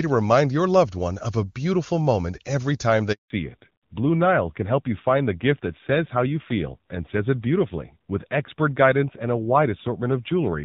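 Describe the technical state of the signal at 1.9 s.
At 1.9 s the speech is intact, carried through the AMR wideband (HD Voice) codec at 23.85 kbit/s with no audible fault at that moment.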